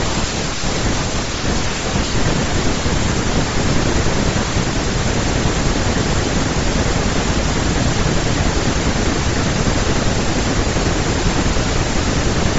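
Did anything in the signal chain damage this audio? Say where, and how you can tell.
Yes, at the codec stage. Throughout the speech the upper spectrum has a plainly audible breathy, grainy texture. That is noise filling bands the encoder zeroed, not a clean low-pass roll-off or a wideband hiss. The likely cause is Bluetooth LC3 compression, consistent with around 32 kbps and 10 ms frames.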